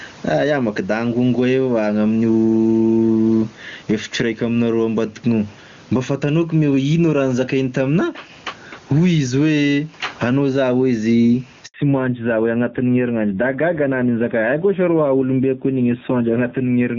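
Throughout the recording the gain swings by around 15 dB. Loud and quiet syllables land closer together than they should, giving a squashed, breathing quality. This is gain pumping, likely caused by input gain set far too high and a fast limiter or compressor clamping down on each peak.

At 11.66 s the speech fades out within a few tens of milliseconds and the line goes completely silent until 11.74 s, an 80 ms hole. This handover gap is what a call sounds like when it is passed from one network to another and no speech frames arrive during the switch. Whatever was said in that window is lost rather than muffled.

From 11.74 s to the end, the speech has nothing above 4 kHz. Before the gap it carried the airy upper band that HD Voice provides. After it, sibilants lose their crispness and the voice turns duller and rougher. This is a fallback to narrowband. The call has dropped from the AMR wideband (HD Voice) codec to a narrowband codec, and the sound points to a low-rate AMR-NB mode, around 7.4 kbit/s, in place of the high-rate wideband link used before.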